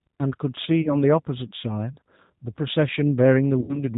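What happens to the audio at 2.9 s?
G.729 codec coding runs through 2.9 s, as it does across the whole clip. Each 10 ms frame of speech is rebuilt from a vocal tract filter, a pitch predictor and a few pulses, with nothing passing above 4 kHz, so the voice sounds muffled, rough and plainly synthetic. This fits an 8 kbit/s G.729A coder.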